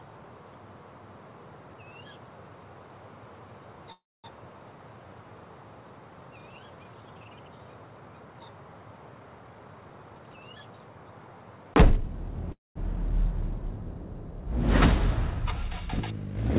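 At 3.92 s a call audio freeze begins. The last sound smears into a fading buzz, then about 240 ms of silence, and the audio resumes intact after a 0.32 s gap. The likely cause is delayed packets emptying the jitter buffer. On the waveform this shows as a decaying tail, then a flat line. On the spectrogram, frozen horizontal bands fade to blank beneath the 4 kHz ceiling of the G.711 call path.

From 9.39 s to 11.28 s a jitter buffer speed-up plays the audio at 116% speed with the pitch unchanged, and it sounds hurried. About 0.3 s of pitch-period pieces were trimmed, which shows as slightly compressed spectrogram patterns.

At 12.52 s a second freeze inserts a 0.24 s gap with about 180 ms of silence, showing the same tail-then-flat shape.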